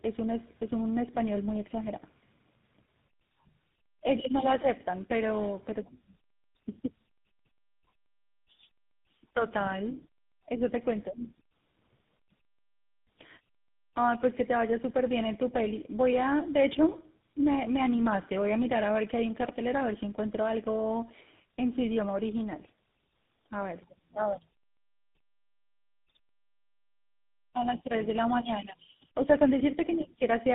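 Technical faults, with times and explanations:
Throughout, tandem speech coding: the speech has passed through three speech codecs in a row, with G.711 mu-law links between them. Each border decodes the signal and hands it to the next coder, which then works on audio already degraded by the last one. The roughness, muffling and warble add up across the chain, finishing on GSM full rate. Nothing is left above 3.8 kHz, so the sound is duller and more grainy than any one link would make it.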